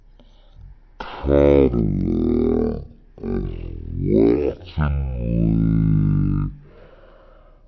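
Throughout, a wrong sample rate plays the speech back far slower than it was recorded, with no conversion, which fits 44.1 kHz audio played at 16 kHz. It runs at 0.363 times normal speed and 17.6 semitones lower, sounding deep and dragging.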